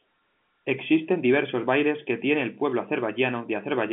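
Nothing goes wrong anywhere here: the speech simply sits in a narrow telephone band with nothing above 3.7 kHz, just what you'd expect from an ordinary G.711 phone line doing its job.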